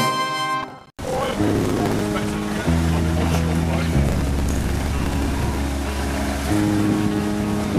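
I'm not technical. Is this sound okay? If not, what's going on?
No. Processor overload crackle from 0.63 to 2.01 s and 4.09 to 5.57 s: the computer falls behind, repeatedly replaying tiny, roughly 10 ms scraps of old audio, which sounds like gritty crackling.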